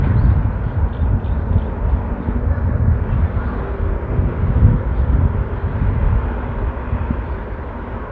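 No technical fault can be heard anywhere in this recording of sounds. Nothing in it calls for a timestamp or a comment of its own.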